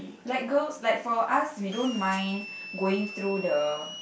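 From 1.72 s onward, a high whistle drifting between 2.65 and 3.23 kHz sits under the speech: a switching supply whistle from a converter cycling audibly.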